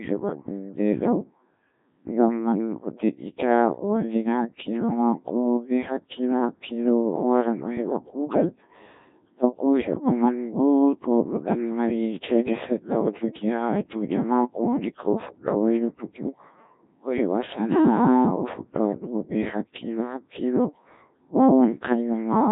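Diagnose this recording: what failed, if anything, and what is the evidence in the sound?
The speech sounds robotic and buzzy from start to finish, with a synthetic, sine-built quality and nothing audible above about 3.8 kHz. The failure is at the codec stage: the recording has passed through the Codec 2 vocoder, and the heavy degradation fits a very low rate of around 1.3 kbit/s. Only pitch, voicing, energy and a coarse spectral envelope survived. The decoder rebuilt the voice from sine waves, so the original waveform detail is gone.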